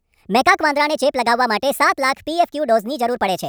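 This speech clip runs throughout at the wrong sample rate: audio captured at 32 kHz is played at 48 kHz without conversion, so everything moves 1.5 times faster and sounds about 7 semitones higher, hurried and chipmunk-like. A spectrogram shows harmonics and formants stretched upward, and the waveform looks time-compressed.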